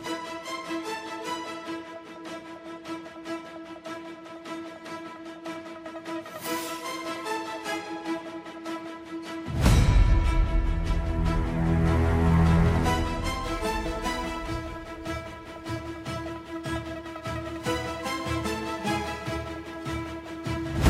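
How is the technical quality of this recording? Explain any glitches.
The recording has one glitch, crude rate conversion, from 13.43 to 20.66 s. Samples were dropped without filtering, which points to 48 kHz being forced to 44.1 kHz. This adds a gritty, inharmonic fizz, roughly 25 dB below the sound, riding on loud and bright passages.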